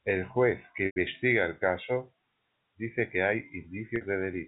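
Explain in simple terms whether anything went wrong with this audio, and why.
Two short gaps are heard, both caused by packet loss with pitch repetition. At 0.86 to 0.96 s, between "juez que" and "el caso", about 100 ms of sound went missing. The receiver filled it by repeating the last stretch of tone, so it sounds briefly held and buzzy before fading. A second, shorter gap of about 50 ms comes at 3.96 s. The clip passes through telephone-style G.711 coding, which keeps only the narrower phone range of sound.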